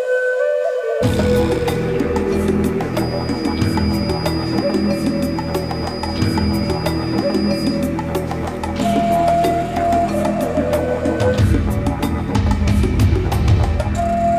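A feedback whistle runs from 2.88 to 7.85 s: a thin, steady tone at 4.9 kHz, about 20 dB below the sound and swelling and fading slowly in level. It is likely a loudspeaker-to-microphone loop balanced just at the edge of feedback, sustaining without running away.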